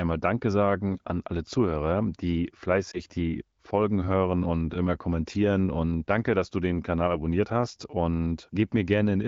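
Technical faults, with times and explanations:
2.91–3.01 s, lost AMR speech frames: a short dip in the sound. That fits a single 20 ms frame failing its checksum over the radio link. The decoder patched the hole by reusing the last good pitch and vocal tract settings at reduced gain, and then needed a moment to settle. That's why it's a brief blip rather than a drawn-out fade. Around it, the AMR wideband (HD Voice) coding sounds clean, pointing to a higher rate like 15.85 kbit/s.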